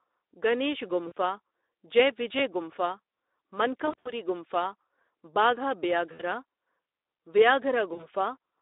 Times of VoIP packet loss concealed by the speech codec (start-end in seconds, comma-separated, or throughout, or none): 1.07-1.12, 3.85-4.13, 6.13-6.22, 7.93-8.07